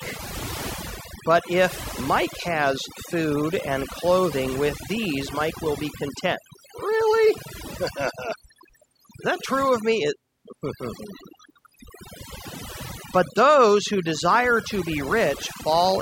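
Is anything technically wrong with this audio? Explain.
Yes. The speech carries overdone noise removal from start to finish. A noise reduction stage was set too aggressively, so it pulls individual frequency bands down or shuts them off whenever they sit close to its noise estimate, taking the softer parts of the voice along with the noise. The pauses fall to near silence dotted with twinkling specks. A noise gate would instead cut the whole signal at once, leaving clean gaps rather than scattered tonal debris.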